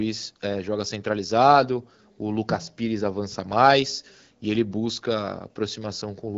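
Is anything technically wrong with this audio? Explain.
No, nothing technically wrong.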